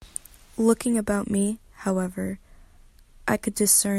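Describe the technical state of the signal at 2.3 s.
At 2.3 s the speech signal is intact, with no audible technical fault at that point.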